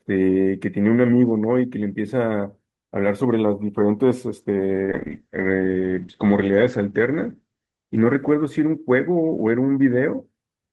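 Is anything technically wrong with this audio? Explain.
Yes, there's a call bitrate drop from 4.84 to 9.69 s. The bandwidth estimate fell, so the encoder coded more coarsely and cut the top end from 12 kHz to 8 kHz. The speech goes rough and muffled, worst for 1.76 s, which fits a dip from roughly 32 to 9 kbps.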